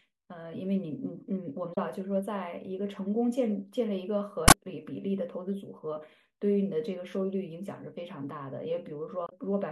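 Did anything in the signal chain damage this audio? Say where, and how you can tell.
Yes. Three brief glitches cut through the speech, at 1.72 to 1.78 s, 4.48 to 4.54 s and 9.25 to 9.33 s, each lasting roughly 60 to 70 ms. They sound like decoder errors rather than anything in the recording itself. This is damaged data in a compressed stream, a codec or storage fault: corrupted bytes made the decoder misread frames, lose sync and hunt for the next valid frame header before clean audio resumed.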